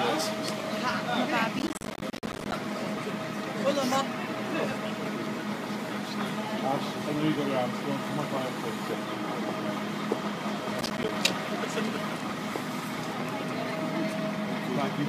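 From 1.59 to 2.53 s there's a burst of processor overload crackle, with a shorter one from 10.81 to 11.09 s. The processor keeps missing buffer deadlines, leaving tiny silent holes, which fits buffers of around 10 ms, so the sound tears gritty, dozens of gaps first, a handful later.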